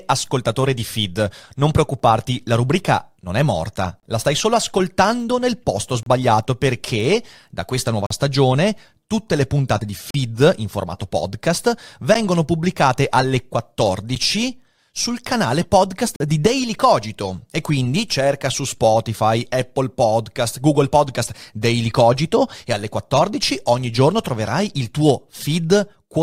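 Seven gaps between stream segments cut into the speech at roughly two-second spacing: 1.99 s, 4.00–4.03 s, 6.03–6.06 s (after "solo ascoltando nel posto"), 8.06–8.11 s, 10.11–10.15 s, 12.14 s and 16.16–16.20 s. Each segment's timestamps leave a short hole, 6 to 42 ms, which the player fills with silence, so the audio clicks off and on abruptly. The waveform drops to silence with sharp edges, and the spectrogram shows thin vertical blank stripes.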